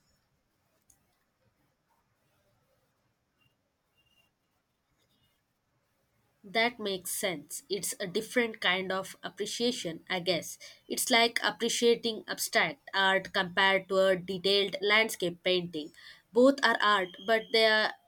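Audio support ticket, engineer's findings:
No faults found on listening; no action needed.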